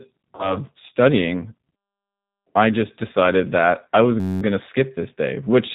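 Throughout, the speech sounds slightly rough and synthetic, with nothing above 4 kHz. This is G.729 codec damage, plainly audible and consistent with an 8 kbit/s G.729A stream.

From 0.35 to 0.60 s the sound smears and fades out, and the voice stays weak or distorted afterwards. This is VoIP packet loss concealed by the speech codec: about 40 ms went missing, which fits two lost packets, and the decoder extrapolated over the gap.

From 4.20 to 4.42 s, between "decided that I was" and "going to skip", a steady buzz at about 94 Hz is inserted. This is a system hang loop: a 10.67 ms piece, which fits a 512-sample buffer, repeats twenty times while the system froze.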